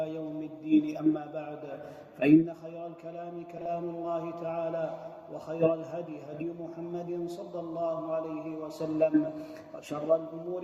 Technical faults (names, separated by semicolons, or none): frames out of order